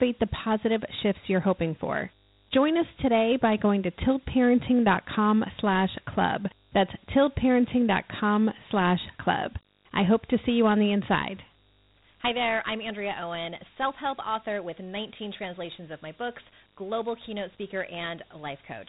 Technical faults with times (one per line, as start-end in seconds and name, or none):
0.00-18.89 mains buzz
0.00-18.89 Dialogic VOX ADPCM